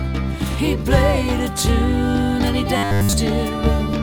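From 2.77 to 3.13 s the audio collapses into a rigid 100 Hz metallic buzz, robotic sound likely from repeated short buffers, which fits a 10 ms block looping throughout.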